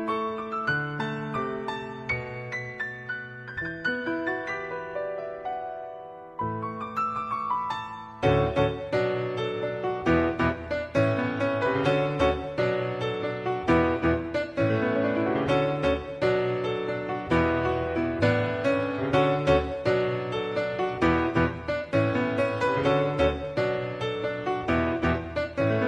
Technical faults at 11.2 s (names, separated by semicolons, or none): none